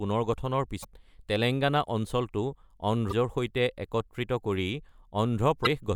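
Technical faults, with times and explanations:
0.81–0.85 s (just before "তেলেংগানা অঞ্চলটো"), 3.09–3.13 s and 5.63–5.67 s, damaged data in a compressed stream: short 40 ms chirps or blips where corrupted frames made the decoder lose sync and resync.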